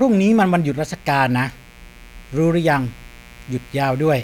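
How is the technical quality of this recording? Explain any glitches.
The recording carries a steady fault from start to finish. A raspy mains buzz sits under the speech the whole way through, about 30 dB below it. It is built on 60 Hz. Sharp switching spikes from a dimmer, a rectifier or a missing shield repeat twice per mains cycle and spread harmonics up into the kilohertz range, which gives the hum its edge.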